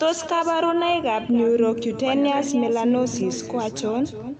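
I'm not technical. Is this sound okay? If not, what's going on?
No. The speech has an echo with no canceller running through the whole clip. Every phrase is followed roughly a third of a second later by a noticeably quieter, thinner copy. This happens when the far end plays the call on a loudspeaker and its microphone sends that sound back down the line with nothing removing it. The call link itself, which trims the highest tones above 8 kHz, is not the problem.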